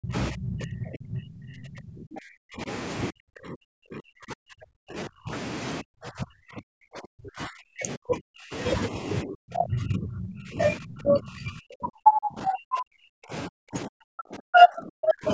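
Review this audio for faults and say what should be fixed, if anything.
Speech suppressed in double talk: the speech dips by about 30 to 40 dB at 0.00–0.14, 0.31–2.69, 3.11–5.32, 5.81–8.53, 9.23–10.61 and 10.77–15.33 s. The likely cause is an echo canceller that cannot separate the near talker from loudspeaker echo while both sides speak, so it attenuates everything. Unlike packet-loss dropouts, these are ducking stretches where the voice is turned down rather than clean gaps. To prevent this, use a full-duplex-capable echo canceller with better double-talk detection, or a headset that removes loudspeaker echo at the source.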